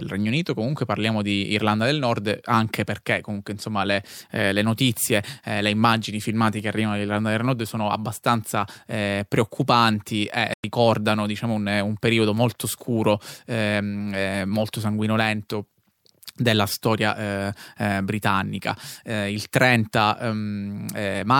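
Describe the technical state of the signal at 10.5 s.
A Bluetooth dropout, likely from packets failing to reach the headphones in time, cuts the speech from 10.54 to 10.64 s. Roughly 100 ms goes abruptly silent, consistent with about five lost packets, and the speech resumes further along, as though it had kept playing.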